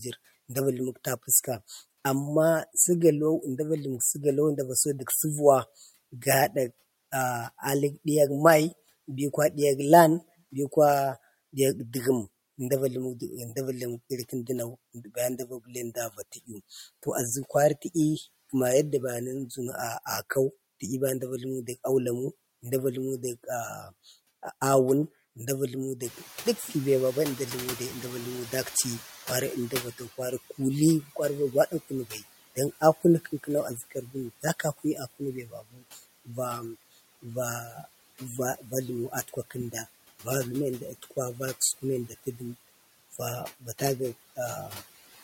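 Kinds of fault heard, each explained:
Noise suppressor artifacts: A suppressor runs throughout, lowering each frequency band it judges to be steady noise, frame by frame, by about 14 dB. The result is a background that pumps with the talker. It drops away in the gaps between words and rises back up underneath them as the gain opens for speech. The residual noise therefore moves with the syllables instead of sitting as a constant floor.
Speech cut by the noise suppressor: In four stretches the suppressor mistakes parts of the speech for noise and turns them down with the background. These occur at 14.29–16.5 s, 29.71–36.28 s, 37.22–40.26 s and 41.02–42.41 s. Soft consonants, word endings and quieter passages are pulled down by up to about 10 to 15 dB. Only short fragments are hit, a fraction of a second in each stretch, and they sound swallowed or faint.
Noise suppressor catching up: Around 26 s the room noise steps up by about 14 dB, settling about 19 dB below the speech. 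The suppressor's noise estimate lags this jump, so from 26.02 s the louder background passes with little reduction. The estimate then adapts over about 4 s, and by 30.04 s the noise is being cut by about 11 dB. This is audible as a burst of noise that gradually sinks.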